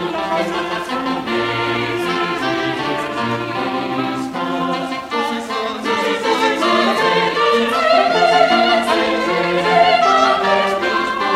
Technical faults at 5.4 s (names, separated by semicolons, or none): none